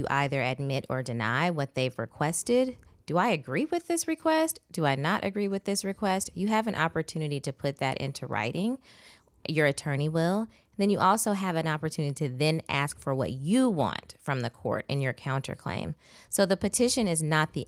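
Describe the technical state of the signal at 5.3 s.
At 5.3 s the speech signal is intact, with no audible technical fault at that moment.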